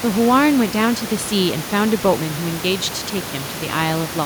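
No technical faults can be heard in the speech; the only thing beneath it is the room's own background noise, sitting about 14 dB below the speech as part of the recording itself.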